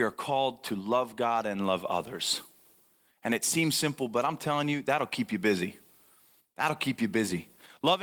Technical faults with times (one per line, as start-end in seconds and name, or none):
none